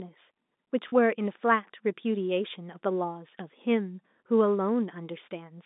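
A brief held, buzzy tone at 0.88–0.92 s marks packet loss with pitch repetition: about 40 ms went missing, consistent with two lost packets, and the last pitch period was repeated across the gap.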